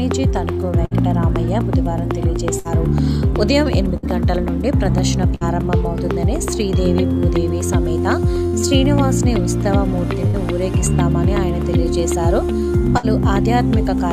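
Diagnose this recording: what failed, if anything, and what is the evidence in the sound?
The network stage failed, with seven bursts of packet loss. They fall at 0.85–0.94, 2.59–2.68, 3.97–4.06, 5.35–5.44, 8.47–8.56, 10.27–10.37 and 12.98–13.06 s. Each time the receiver lacked about 60 ms of audio. It stretched the last sound it had across the hole for roughly 50 to 70 ms, fading it down into a brief buzz or hiss. Then the sound resumes further on, with that stretch simply gone.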